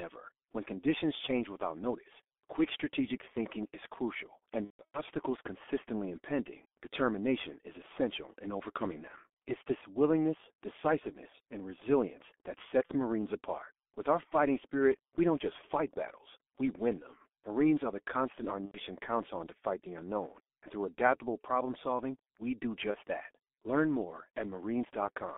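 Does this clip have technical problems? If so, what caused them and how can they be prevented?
Yes. Heavy G.723.1 codec damage runs through the whole speech clip. At 6.3 kbit/s, with the line band limited to 250 Hz to 3.5 kHz, the codec's slow voice model leaves the speech muffled and hoarse, with smeared consonants. A wideband codec at a higher bitrate would prevent this.

VoIP packet loss concealed by the speech codec occurs four times. The longest gap runs from 4.64 to 5.01 s, between "strategic thinking is crucial" and "consistently impending determination is". The loss there is scattered, about 240 ms in total, with the longest run about 150 ms, which fits several lost 30 ms frames. Shorter gaps come at 12.86 to 12.93 s after "decisiveness and resilience that", at 18.65 to 18.80 s, and at 22.91 to 22.99 s after "problem solving we do". Each time the decoder stretched its last pitch and filter into a buzzy tone or coloured noise that fades. 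A jitter buffer and forward error correction would reduce these losses.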